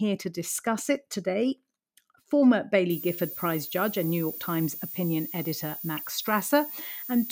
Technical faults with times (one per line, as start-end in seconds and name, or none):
2.90-7.32 switching supply whistle
5.97 DAB burbling